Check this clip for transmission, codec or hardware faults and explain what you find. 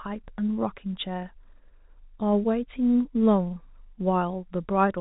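I find no transmission, codec or hardware faults in this clip.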